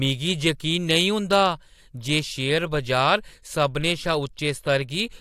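No technical faults are audible.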